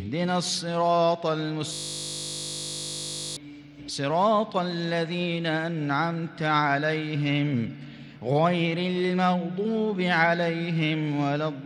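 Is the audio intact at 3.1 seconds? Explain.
No. At 3.1 s the audio is caught in a system hang loop running from 1.73 to 3.37 s. The system stalled while the sound hardware kept replaying one 20 ms slice of its ring buffer, so the sound collapses into a steady 50 Hz buzz.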